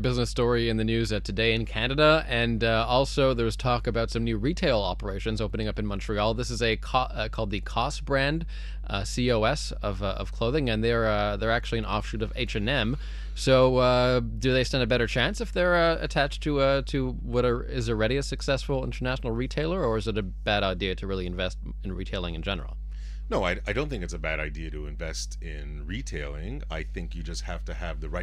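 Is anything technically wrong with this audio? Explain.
Yes. Mains hum runs through the whole speech clip: a steady 50 Hz tone with low harmonics, sitting roughly 10 dB below the speech and clearly audible. A ground loop or nearby transformer is coupling the power line into the signal. On a spectrogram it shows as unbroken horizontal lines at 50 Hz and its multiples. In the waveform the silent gaps carry a constant low ripple instead of flat silence.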